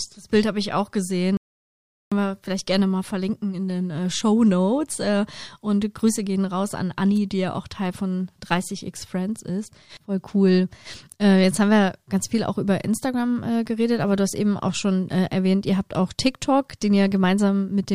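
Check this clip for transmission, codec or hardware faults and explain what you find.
There is one fault in this speech clip, an audio dropout to silence from 1.37 to 2.12 s. The input was likely lost briefly, with the recorder writing silence in its place. Speech cuts off after "habe ich auch" into dead silence with no room tone, then resumes at "wir vielleicht gerne mal", losing about 0.75 s of speech.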